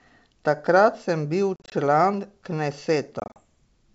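Packet loss on an ADPCM call strikes this speech clip at 1.56 to 1.73 s, just after "sem bil", and again at 3.20 to 3.39 s. In each spot, about 100 ms of audio is knocked out in silent gaps scattered over 160 ms, the longest 40 ms, which sounds like a handful of lost packets. The decoder's predictor and step size lose track of the sender's, so the speech returns slightly distorted before settling. The G.722 wideband coding carries the speech cleanly up to 7 kHz.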